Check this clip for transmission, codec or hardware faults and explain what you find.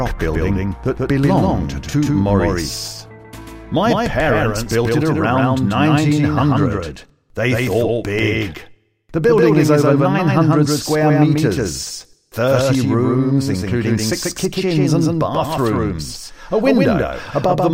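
One fault is present. Throughout the clip there is a doubled audio track: a second, equally loud full-band copy trails by about 150 ms, likely from a slower second capture path. Unlike echo, it repeats once without decay or room colour.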